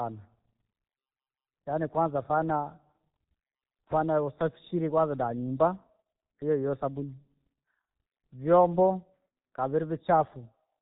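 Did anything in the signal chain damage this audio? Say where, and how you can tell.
Yes, at the codec stage: heavy G.723.1 coding damage throughout. The speech is cut off above 4 kHz, hoarse, and its consonants blur, consistent with a bitrate near 6 kbit/s. A plain low-pass would only muffle; the hoarseness comes from 30 ms frames updating the voice model slowly.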